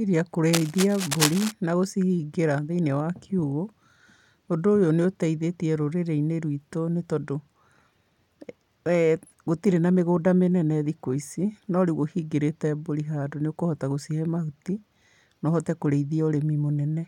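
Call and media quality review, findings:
Cable scratch noise, 0.53–1.52 s, ending just before "na gũcihingĩra". Dense, uneven rustling bursts only slightly under the speech, roughly 5 dB down. Likely a worn cable or connector moved, contact resistance fluctuating. Irregular texture, not evenly spaced clicks, rules out digital glitching.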